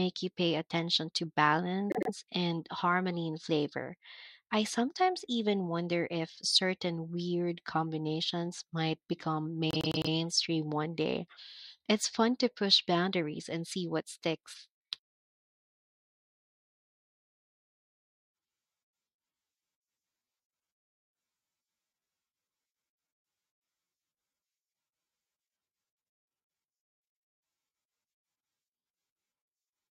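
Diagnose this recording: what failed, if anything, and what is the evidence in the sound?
A stutter replays the same 0.1 s block at 1.9 to 2.1 s, before "and harmony in flavor", and at 9.71 to 10.12 s, between "weird combinations might become" and "one day". These are repeated frames from the codec or storage stage: a 104.5 ms run, which fits four compressed frames, was duplicated two and then four extra times, adding 209 ms and 418 ms.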